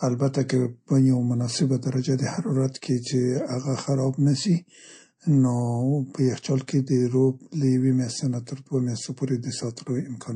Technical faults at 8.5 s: MP3 compression; pre-echo

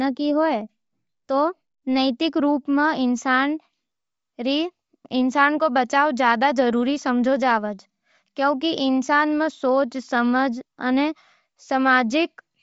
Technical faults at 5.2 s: Bluetooth LC3 compression

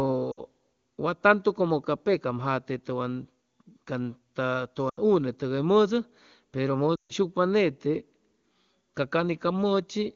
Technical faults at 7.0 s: lost AMR speech frames

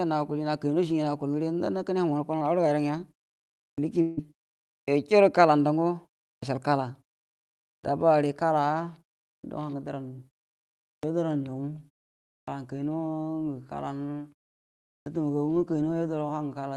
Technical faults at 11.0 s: clipped start after a pause

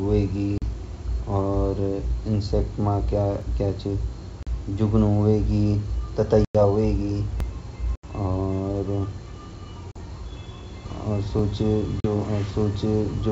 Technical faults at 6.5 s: packet loss on an ADPCM call

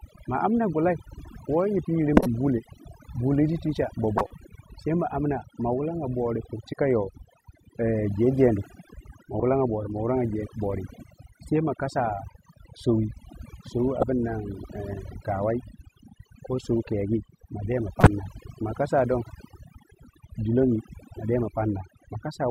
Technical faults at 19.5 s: overdone noise removal

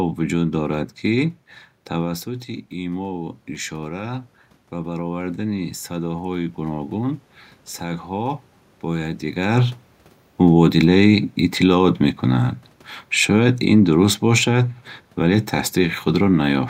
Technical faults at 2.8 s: automatic gain rising

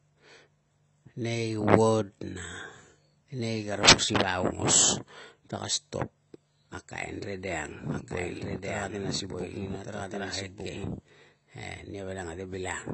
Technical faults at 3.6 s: AAC compression

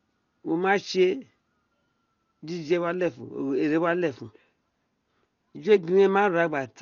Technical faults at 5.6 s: Dolby Digital compression

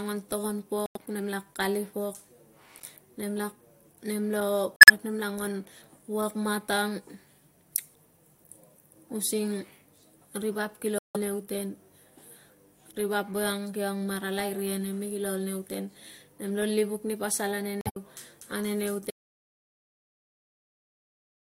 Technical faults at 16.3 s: none

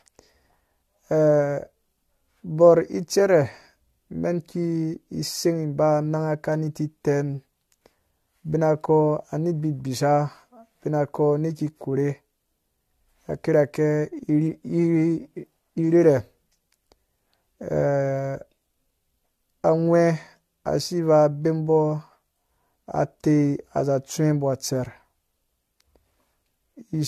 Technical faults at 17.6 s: generation loss

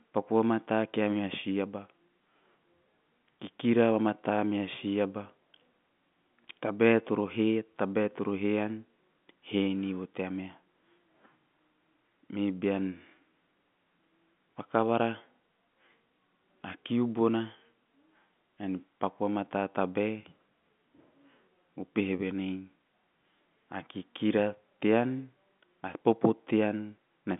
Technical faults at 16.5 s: none

